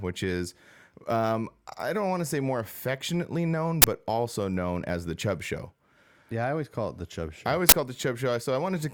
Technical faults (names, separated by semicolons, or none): uninitialised buffer